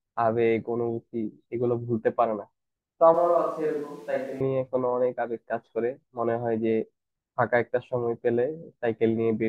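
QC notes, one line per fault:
3.14 to 4.40 s, switch to a distant microphone: for just over a second the speech suddenly turns roomy and hollow, then snaps back just as abruptly. The level falls by about 5 dB and room noise comes up, sitting roughly 35 dB below the speech. The likely cause is that the close mic dropped out and a pickup further from the speaker, maybe the camera's, filled in, so we're hearing more of the room.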